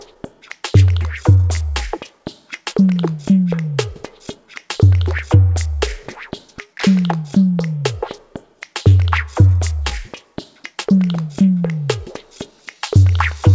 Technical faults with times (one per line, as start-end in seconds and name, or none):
0.00-13.54 clock drift between sender and receiver
0.14-2.22 scattered short gaps
0.77-12.99 repeated timing corrections
7.54-12.42 scattered short gaps